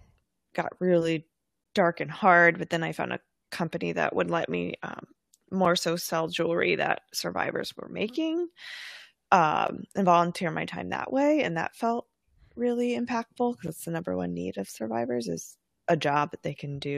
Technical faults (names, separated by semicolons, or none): gap between stream segments